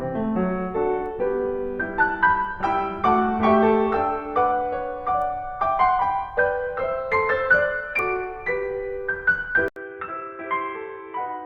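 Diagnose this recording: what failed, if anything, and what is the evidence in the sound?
After an 80 ms gap at 9.68 s, the music returns dull, about 10 dB quieter and cut above 3.8 kHz: the driver likely switched input to a poorer device.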